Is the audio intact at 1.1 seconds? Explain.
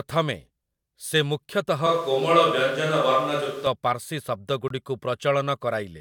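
Yes, the speech is intact at 1.1 seconds, with no dropout, click, distortion or other fault at that moment.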